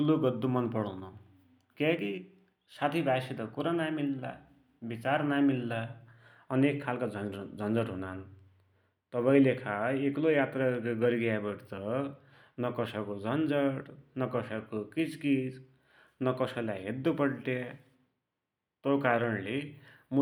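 No technical faults are audible.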